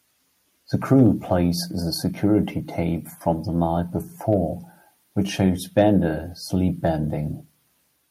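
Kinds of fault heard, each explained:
Hard clipping: A brief crackle on the loudest peaks from 0.93 to 1.32 s, just before "the security tape from", and a single tick at 4.33 s after "tape from the night". Peaks exceed the stage's limit by about 1 dB and are flattened, adding high harmonics.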